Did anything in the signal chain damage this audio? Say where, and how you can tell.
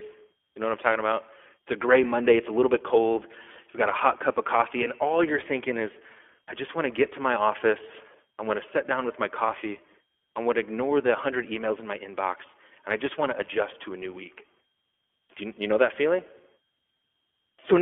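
Yes. Throughout, the speech sounds thin and boxed-in, confined to roughly 300 Hz to 3.4 kHz, with a plainly audible rough, synthetic grain. That is codec damage from the iLBC codec, which codes each short frame's excitation independently. The sound fits its 15.2 kbps, 20 ms-frame mode.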